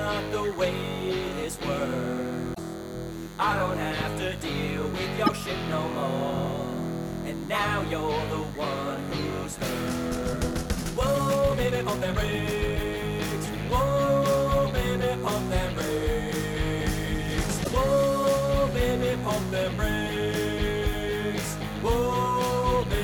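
A nearby DECT cordless phone or base station is pulsing its radio every 10 ms, and the audio circuit rectifies those bursts into a DECT phone buzz. It runs through the whole recording as a thin, steady 100 Hz buzz dense with harmonics, sitting roughly 20 dB below the audio. Damaged data in the compressed stream makes the decoder misread frames and lose sync while it hunts for the next header. That gives short squawks and blips at 2.51 to 2.59 s, 5.26 to 5.29 s and 17.61 to 17.68 s. From 10.07 to 12.87 s the pace abruptly jumps to about 1.75 times normal while the pitch stays put, so the passage sounds rushed. The likely cause is a time-stretched section, where software compressed the audio to fit a length by dropping short slices instead of resampling.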